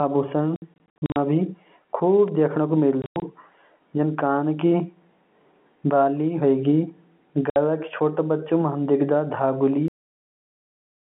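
A speech recording carried over a G.711 A-law telephone line, band-limited to roughly 150 Hz to 3.4 kHz, it suffers packet loss filled with silence in three places. From 0.56 to 1.16 s about 300 ms drops out in scattered holes, the longest 60 ms. From 3.02 to 3.22 s about 140 ms goes, including a 100 ms run, and 7.50 to 7.56 s loses 60 ms. The holes come in steps that fit 20 ms packets, and each has hard edges. A single block of digital silence at 2.28 s lasts only 2.9 ms, which fits one 128-sample buffer left unfilled. It sounds like a lone tick, not a rhythmic chopping, and is far shorter than any packet gap. Finally, a cut-off end stops the speech dead at 9.88 s. It drops straight to digital silence with no decay and never resumes, unlike the brief gaps earlier.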